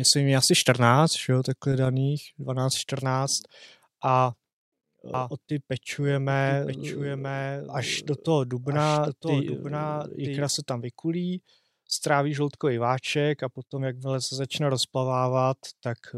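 Speech with a doubled audio track from 5.14 to 10.44 s, starting just before "se tam vykulí stráví": a full-band copy about 5 dB quieter trails by roughly one second, likely a second capture path. Unlike an echo, it has no decay or room colour and cuts in and out abruptly.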